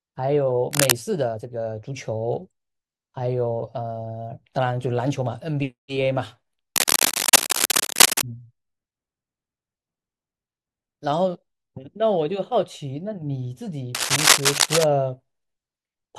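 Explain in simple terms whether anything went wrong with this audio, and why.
Cable scratch noise appears three times in this speech: from 0.71 to 0.99 s, 6.76 to 8.22 s, and 13.95 to 14.84 s. Each burst is a rough, uneven scratching, louder than the speech. The likely cause is a worn cable or connector being moved, briefly making a bad electrical contact.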